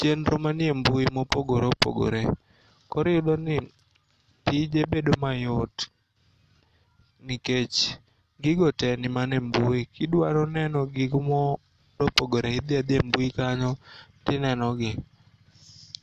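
No technical faults are audible.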